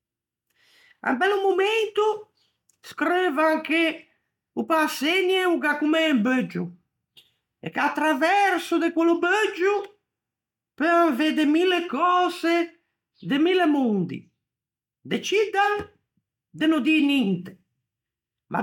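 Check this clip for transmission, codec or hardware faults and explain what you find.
No transmission, codec or hardware faults.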